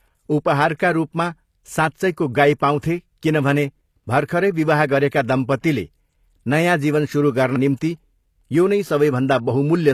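Speech, likely passed through HE-AAC compression for its full length, at a level of damage that fits a 24 kbps stream. The codec keeps only the lower spectrum and rebuilds the treble by copying bands upward, so the top end is a plainly audible imitation rather than the original, with nothing above 14.9 kHz.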